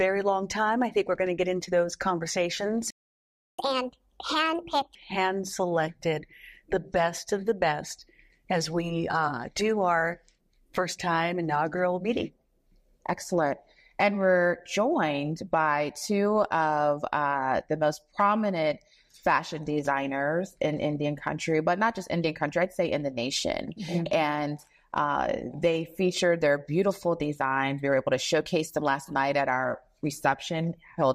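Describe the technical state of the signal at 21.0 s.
The audio at 21.0 s is intact, with no technical fault present at that moment.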